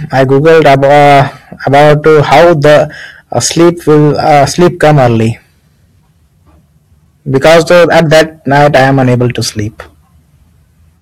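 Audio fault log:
Throughout, hard clipping: speech driven about 16 dB past full scale, roughly 15% of samples flattened, giving harsh fuzz; waveform shows squared-off peaks, spectrogram dense high-frequency smear.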